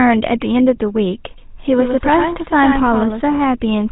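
From the first moment to the end, the speech passes through the GSM full-rate codec, and the plainly audible damage fits its 13 kbps setting. The codec rebuilds the voice from a vocal-tract filter driven by a sparse pulse train that keeps only one excitation sample in three, and it discards everything above 4 kHz. The result is a dull, band-limited voice with a constant buzzy, gravelly roughness riding on every syllable.

At 1.38 s a second, full-band copy of the speech abruptly joins, trailing the original by roughly a tenth of a second and sitting about 5 dB lower. This is a doubled audio track, likely caused by the signal being picked up again over a slower path or by an edit holding two misaligned copies. The copy has no reverb tail or room colouring, so it sounds like a flat, stuttering echo. It cuts off just as suddenly at 3.22 s.

At 1.65 s, while the doubled track is still running, GSM bit errors strike. 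Corrupted bits arriving at the speech decoder scramble its filter, pitch or gain parameters, and the short burst suggests only a few frames were hit. For that instant the spectrum is bent out of shape or the level jumps, producing a brief squawking pop with a gargled edge that breaks through the already buzzy voice.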